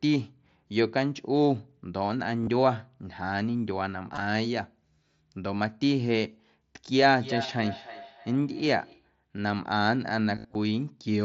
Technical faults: concealed Bluetooth headset packet loss; feedback echo between two devices

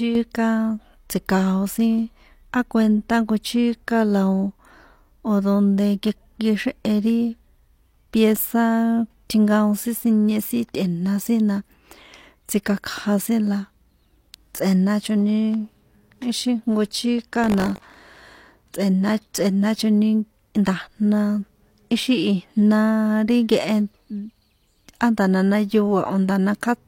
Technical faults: buffer tearing

